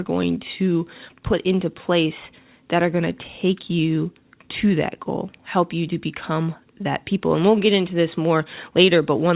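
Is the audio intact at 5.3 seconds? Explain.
Yes, the speech at 5.3 seconds is intact, carried through a narrowband call path with nothing above 4 kHz, which fits G.711 mu-law telephony coding.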